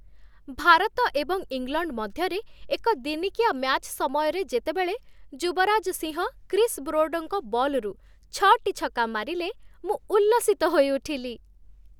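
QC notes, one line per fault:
No faults found.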